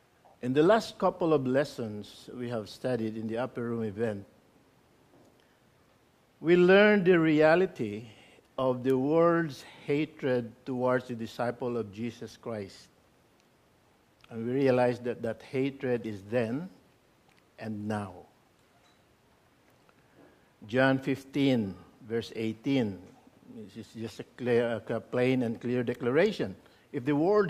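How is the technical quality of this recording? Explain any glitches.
There is one glitch. Bit error spike at 8.90 s: a single corrupted sample jumps to about -20 dBFS and snaps back, producing one sharp broadband tick unrelated to the surrounding sound.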